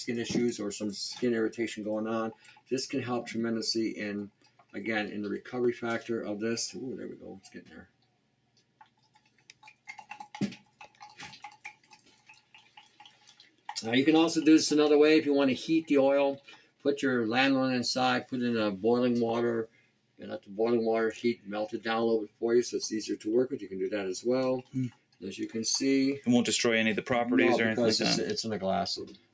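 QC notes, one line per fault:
Throughout: noise suppressor applied to music or sounds. A speech-tuned suppressor treats sustained tones, ambience and reverb as noise, so the level pumps by roughly 5 dB. Onsets pass while held material and decays sink, giving a fluttering, thinned sound through the call path, which carries nothing above 8 kHz.
2.35–2.71 s, 4.30–4.74 s, 7.16–13.68 s, 16.57–16.85 s, 19.67–22.42 s, 24.63–25.23 s, 29.04–29.34 s: sound cut by the noise suppressor. The steady or fading parts are pulled down by up to about 12 dB and their tails are cut short. The longest stretches are around 7.2–13.7 s and 19.7–22.4 s.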